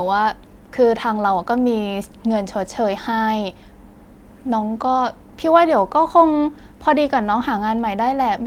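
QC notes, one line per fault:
No faults found in this speech clip. Nothing needs flagging on this pass.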